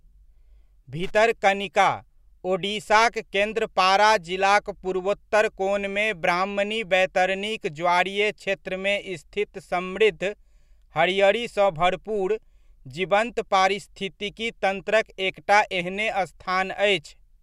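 A worn or dirty contact making and breaking intermittently chops the speech from 1.03 to 1.16 s, producing a brief, irregular burst of loose connector crackle.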